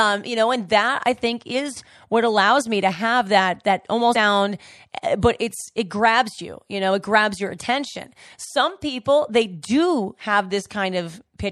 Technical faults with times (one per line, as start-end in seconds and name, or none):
0.00-11.52 MP3 compression
4.14 compressed frames skipped